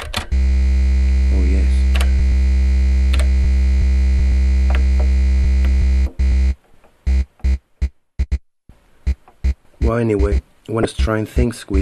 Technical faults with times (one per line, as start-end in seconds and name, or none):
10.82-10.85 damaged data in a compressed stream